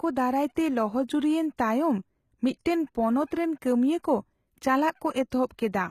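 A speech clip with plainly audible damage throughout, most likely from HE-AAC compression at a low bitrate around 20 kbps. The treble sounds bright but synthetic, with s sounds gritty and metallic. Unlike a plain low-pass or MP3 dullness, the top is rebuilt rather than missing, then stops completely above 14.9 kHz.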